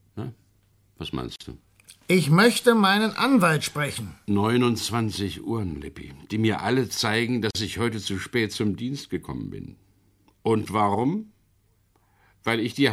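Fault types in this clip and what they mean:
Gap at a join of encoded pieces: The speech was encoded in separate pieces and joined without trimming. Each piece keeps its encoder's leading silence and its padded last frame. The speech stops dead twice. It drops out at 1.36 s for about 45 ms, then at 7.51 s for about 42 ms, between "die mir alle zeigen" and "ich heute zu spät". The edges are smeared by the codec, and the speech resumes where it left off.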